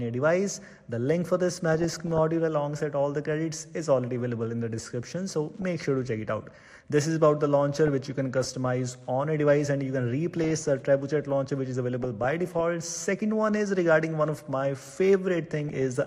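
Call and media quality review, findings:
Dull, band-limited sound with a gurgling, granular texture throughout. Probable component: MP2 encoder, likely squeezed to a rate around 80 kbps; upper sub-bands drop out and flicker, and the remaining bands are coarsely quantised.

DAB burbling: short noise blips in single sub-bands over the programme at 1.68–2.19 s, 5.62–5.86 s, 7.75–8.66 s, 10.32–10.69 s, 12.01–12.61 s and 15.68–15.82 s. Probable component: weak DAB reception; residual bit errors, a few tenths of a percent, corrupt samples, putting noise blips in single sub-bands, and, where they get through, scale factors, making sub-bands jump in level for up to a frame.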